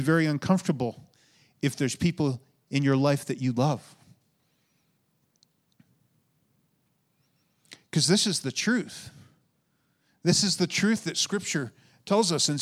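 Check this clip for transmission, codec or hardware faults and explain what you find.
One fault is present. From 8.22 to 11.29 s there is crude rate conversion. The speech was resampled by linear interpolation with no filter, which fits a 44.1 kHz to 48 kHz change. This adds stray inharmonic tones about 30 dB below the speech, heard as a gritty fizz.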